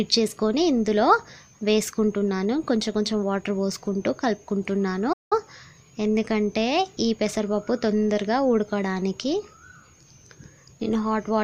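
At 5.12 s the sound cuts out mid-flow and stays silent until about 5.33 s, a gap of roughly 0.18 s before it carries on. This is a playback stall, likely caused by the player running short of buffered data or its output thread being held up.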